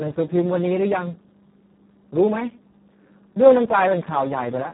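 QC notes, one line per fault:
Throughout: Speex codec, heavily squeezed. The speech comes out hoarse, buzzy and close to robotic, which fits a setting down around 4 kbps where the excitation gets almost no bits. Nothing survives above about 3.9 kHz, so it's dull and narrowband too.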